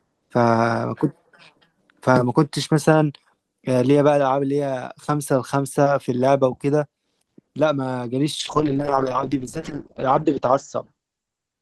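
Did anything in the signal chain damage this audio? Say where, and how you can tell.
Yes, a call bitrate drop at the codec stage from 8.41 s to the end. The encoder's rate falls from 32 to 8 kbps, bottoming out for 1.59 s, so the speech turns coarse and watery. A spectrogram shows energy above 8 kHz vanishing where it previously reached 20 kHz.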